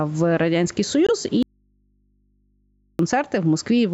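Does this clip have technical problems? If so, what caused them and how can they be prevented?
Yes. Gain pumping runs through the whole speech clip. The level swings by about 10 dB, likely from input gain set too high with a fast limiter. Lower the microphone gain to prevent it.

A Bluetooth dropout leaves a 21 ms hole from 1.07 to 1.10 s, likely one lost wireless frame. Keep the headphones close and the radio path clear.

An audio dropout to a faint residue runs from 1.43 to 2.99 s. Only mains hum remains, about 45 dB down, likely a broken input connection. Secure the cable and connector.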